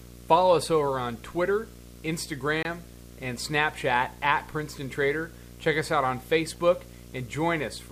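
Video or display buzz runs through the whole recording. A screen or video cable has coupled electrically into the audio path, so a buzz at 59.94 Hz, the picture's field rate, sits under the speech with a gritty hash above it. A thin, very high whine at 15.7 kHz, the line-scan rate, rides on top. The interference sits roughly 15 dB below the speech.

A Bluetooth dropout occurs from 2.63 to 2.65 s, where the speech suddenly cuts to silence for about 23 ms and then comes back. The likely cause is audio data failing to reach the headphones in time and being discarded. The gap's length fits a single lost packet. The speech resumes further along, as though it had kept playing through the silence rather than pausing.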